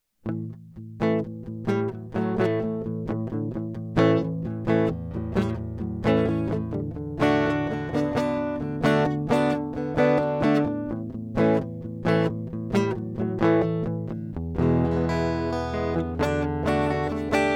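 A music clip with no audible technical faults.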